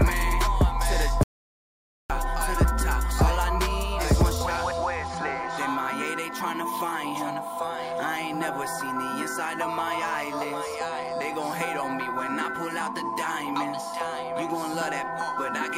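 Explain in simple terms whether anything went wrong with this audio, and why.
Something did go wrong early on: an audio dropout to silence from 1.23 s to 2.10 s. For just under nine tenths of a second the sound stops dead, mid-flow, and the gap is total silence with no background hiss or room sound at all. That points to the input signal being lost while recording carried on writing empty samples, likely from a momentary disconnection, a failed link or an accidental mute. Whatever happened during that gap is simply missing.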